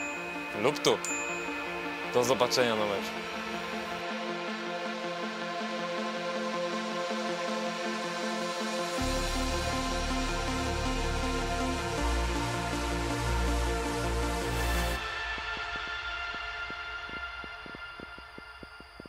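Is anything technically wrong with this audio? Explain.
Yes. From 15.38 s to 19.07 s a train of clicks appears, likely from interference by nearby equipment or a faulty connection or power supply injecting repeated pulses. About twenty similar clicks arrive unevenly, roughly 5.4 per second, peaking about 5 dB above the sound as sharp ticking.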